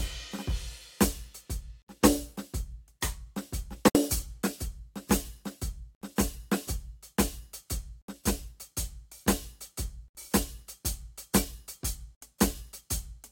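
Separately encoded two-second pieces of this music were joined without trimming each run's start delay and final-frame padding, leaving a gap at a join of encoded pieces at 1.82, 3.88, 5.95, 8.02, 10.08 and 12.15 s. Each gap lasts 63 to 67 ms, with smeared edges that leave the silent part shorter, before the music resumes where it stopped.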